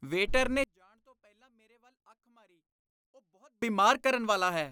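Speech, with one channel likely inverted in polarity between 0.64 and 3.62 s, so the centred voice cancels against itself when the channels combine to mono. Level drops by about 36 dB, leaving only a faint residue of the difference between channels.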